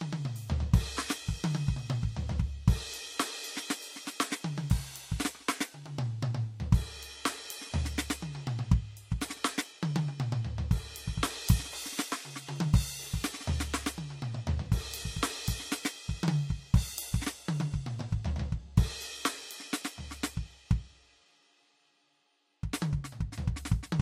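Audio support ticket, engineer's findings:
Transcoding between lossy codecs, throughout the music: nothing above 16.5 kHz, the different codecs' artefacts heard together. Likely cause: a roughly 64 kbit/s MP3 re-encoded to Vorbis near 45 kbit/s, each pass adding its own artefacts.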